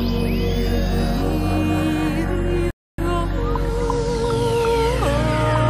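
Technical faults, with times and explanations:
2.71 to 2.98 s, rebuffering stall: the sound just drops to silence for about 0.28 s, then picks up exactly where it left off. The player ran dry of downloaded audio and waited for more, so nothing's missing, it's just stretched out by that gap.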